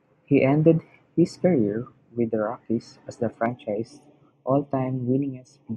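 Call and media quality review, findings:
Channel delay (comb filtering) from 3.46 s to end of clip. One channel lags by about 0.3 ms before the mono sum; common content cancels at evenly spaced notches starting around 1.5 kHz. Speech turns hollow and phasey.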